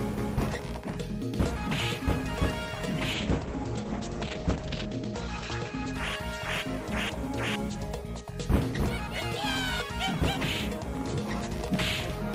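From 3.15 s to 6.89 s the sound turns rough and muffled, losing everything above 8 kHz, and is harshest for a 1.68 s stretch. This is a call bitrate drop: the encoder switched to much coarser coding, which fits a fall from 32 to 10 kbps.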